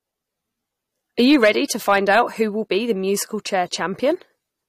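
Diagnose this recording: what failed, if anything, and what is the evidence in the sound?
Hard clipping occurs twice in this speech, from 1.20 to 1.49 s and from 1.88 to 2.21 s, just before "who will be the". Each burst carries crackle on the peaks. The signal overdrives a gain or conversion stage by about 5 dB, so the peaks are cut flat at the ceiling. Those flat tops add high harmonics, which cause the crackle. The overload is modest but consistent across both events.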